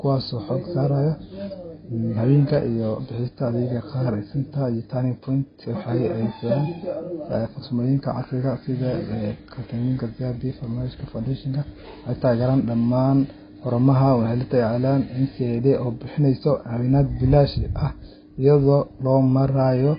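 Throughout, the speech was likely squeezed by heavy low-bitrate AAC compression, fitting roughly 16 kbps, so nothing survives above 5 kHz and it sounds dull and smeared.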